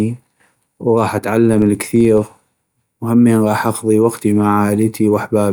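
From 1.32 s to 2.95 s, the speech carries a fine, regular ticking that blurs into a low buzz near 23.4 Hz. This is a filter restarted on every block. The filter loses its memory at each block boundary and starts again from silence. Each restart leaves a small transient. The tick rate fits a 2048-sample block. The ticks grow louder as the speech grows louder and fade when it quietens.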